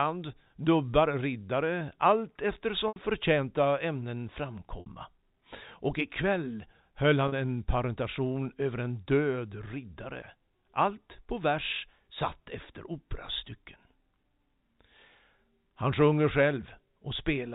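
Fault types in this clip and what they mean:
packet loss with pitch repetition: Three brief buzzy, held-over moments of 80, 60 and 40 ms, the first just after "dubbar riddare allt". Lost stretches of the telephone-band audio were bridged by repeating the last pitch period, fading it over about 50 ms, before normal sound resumed.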